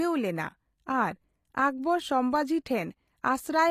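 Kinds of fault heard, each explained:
HE-AAC compression: The coding damage is plainly audible, and the treble stops dead at about 14.9 kHz. That pattern likely comes from HE-AAC at a low rate, around 24 kbps. That codec keeps only the lower spectrum and rebuilds the top by copying lower bands upward under a rough envelope. So the high end of the speech here is a synthetic stand-in whose harmonics don't match the real ones across the crossover.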